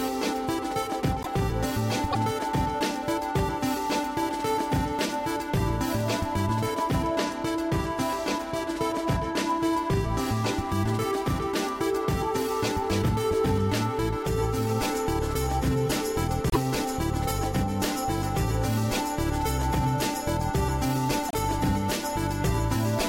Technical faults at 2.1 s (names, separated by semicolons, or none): broken MP3 bit reservoir